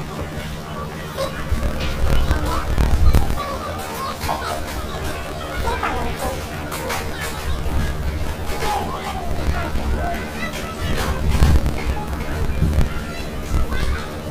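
Throughout the clip, planar audio is read as interleaved: each 26.12 ms block of left-then-right samples is taken as alternating pairs, so every block plays twice at double speed. The sound comes out an octave high, with a 38.3 Hz flutter at the block rate.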